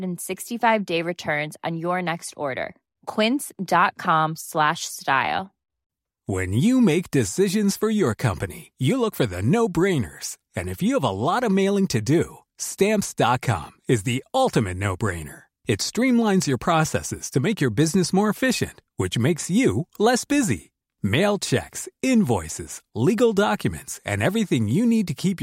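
No technical faults can be heard anywhere in this recording.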